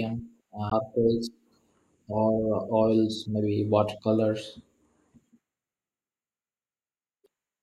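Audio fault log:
0.69–0.73 s and 7.24–7.26 s, damaged data in a compressed stream: two brief disruptions break into the speech, about 40 ms and 24 ms long. Corrupt bytes reach the decoder, which builds garbage from them and loses frame sync until it finds the next valid header. A plain dropout would leave silence, and a click would be a single sharp impulse.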